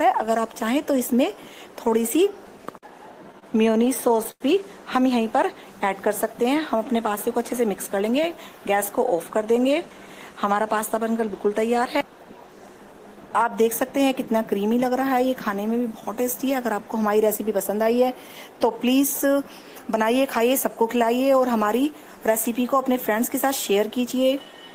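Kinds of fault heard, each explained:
Repeated stalls (stutter): from 3.23 to 4.42 s, playback ran dry 14 times, the longest gap 93 ms; the waveform shows repeated copies of the last cycle, with fading in longer holds.
Jitter buffer speed-up: short pitch periods were cut to reduce delay, so audio hurries at 106% around 7.5–8.0 s and 105% around 23.1–24.3 s; spectrogram harmonics keep their spacing while events arrive compressed.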